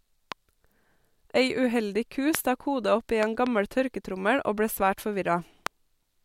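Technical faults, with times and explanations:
0.32–0.34 s, 2.35–2.37 s, 3.23–3.49 s (two pops) and 5.67–5.69 s, loud pop: sharp thumps about 15 to 20 dB above the speech, which continues uninterrupted underneath, unlike a dropout click. The likely cause is a voltage pulse from a switch, static or a driver glitch.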